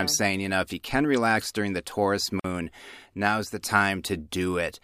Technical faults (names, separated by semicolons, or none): gap at a join of encoded pieces